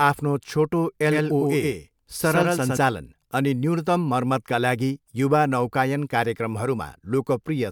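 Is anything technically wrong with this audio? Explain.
Yes. From 1.11 to 2.77 s there is a doubled audio track: an equally loud copy of the speech trails about a tenth of a second behind, likely captured twice, and it starts and stops abruptly.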